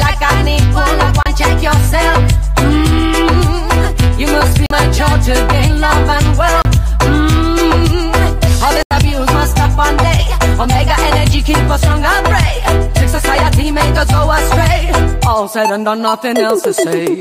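Four brief dropouts to silence land at 1.23 s, 4.66 s, 6.62 s and 8.83 s, lasting about 30, 42, 31 and 83 ms, the last clearly the longest. Each time the sound just vanishes and then carries on from where it left off. That stop-and-resume pattern points to a likely Bluetooth stall: packets held up in the wireless link leave the headphones' buffer empty, so playback pauses until the resent data arrives.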